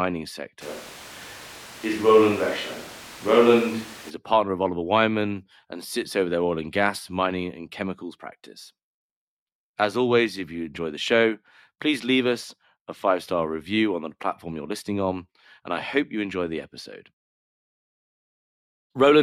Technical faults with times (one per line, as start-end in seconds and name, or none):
0.63-4.09 switch to a distant microphone